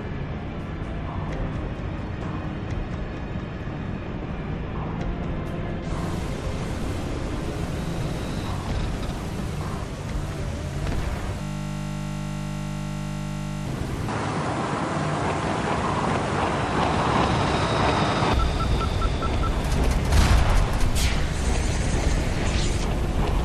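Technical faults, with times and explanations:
11.42 to 13.66 s, system hang loop: the system froze while the sound hardware kept replaying one 20 ms stretch of its ring buffer, more than a hundred times over. Such a short loop repeating at 50 Hz merges into a steady, pitched buzz.
14.08 to 18.33 s, input switched to a poorer device: the sound abruptly turns duller, with nothing above 10.5 kHz and a new noise floor about 45 dB down, but no gap or level jump at the change. The likely cause is the recording moving onto a narrower-band microphone.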